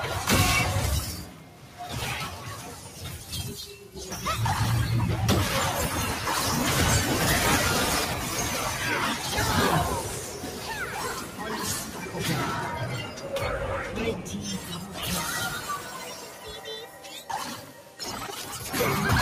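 A noise suppressor built for speech, applied to this non-speech sound, keeps shifting the level by around 10 dB. Held tones and tails pump and thin while attacks pass through, which is unlike a compressor, whose gain follows loudness. The suppressor also cuts steady sound by about 5 dB (about 4 dB at 13.06–13.27 s) at 1.2–1.8, 2.76–3.27, 10.07–12.1, 13.06–13.27, 14.58–14.98, 15.84–17.05 and 17.61–17.99 s. In these spots the sound sinks rather than vanishing as it would in a dropout.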